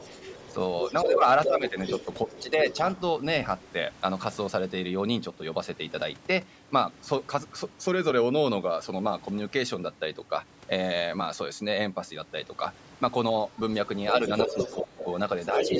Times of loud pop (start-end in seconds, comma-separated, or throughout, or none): none